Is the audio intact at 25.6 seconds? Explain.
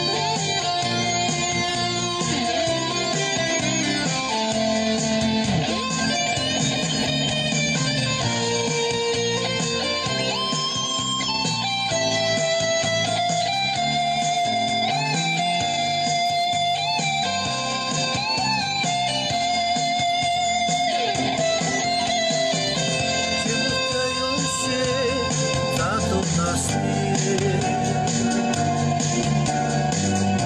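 Yes, the audio is intact at 25.6 seconds, with no dropout, click, distortion or other fault at that point.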